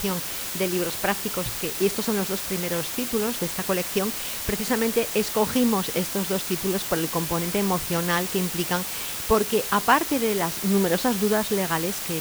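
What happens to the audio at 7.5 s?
At 7.5 s you're hearing the same thing that runs through the whole clip: low bit depth with dither. The audio has been rounded down to about 5 bits, with random dither noise added before the rounding, so the quantisation error turns into a steady white hiss instead of gritty distortion. At that depth the hiss is strong, sitting nearly as loud as the sound itself, an even wash of noise with no crunch to it.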